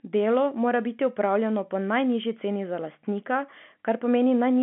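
No technical faults can be heard anywhere in this speech clip. It carries the narrow band of G.711 telephone coding, with nothing below about 200 Hz or above about 3.4 kHz, and any codec damage is faint at most.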